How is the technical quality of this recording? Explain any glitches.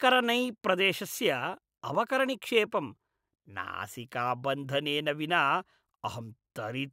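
The speech recording has no technical glitches or signal faults that can be heard.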